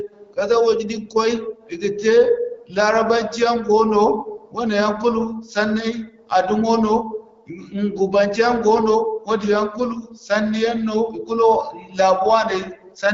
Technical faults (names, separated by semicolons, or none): none